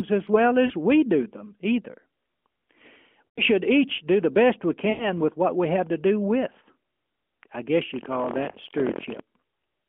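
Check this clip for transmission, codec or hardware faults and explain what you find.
The clip has two kinds of fault: four bursts of lost AMR speech frames and one stretch of buffer tearing. The speech is carried through a narrowband mobile path, limited to roughly 200 Hz to 3.4 kHz.

Lost AMR speech frames occur at 0.66–0.73 s, 3.28–3.41 s (just before "should each do the"), 4.90–5.06 s (between "do the best we" and "with what we have") and 8.52–8.55 s. Corrupted frames failed their check, so the decoder stretched the last good pitch and vocal-tract settings while lowering the gain. The 20 and 40 ms gaps are heard as brief dips. The 80 and 100 ms gaps, which fit runs of four and five lost frames, smear into a fading drone before the voice returns weak.

Buffer tearing runs from 7.92 to 9.20 s, starting right after "I guess". The writing and reading positions in the ring buffer have drifted until they cross within every period. 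About a tenth of each buffer therefore replays audio roughly a tenth of a second old, joined by hard edges. The result is a steady 43.1 Hz robotic rattle over the speech, which fits a 1024-sample buffer.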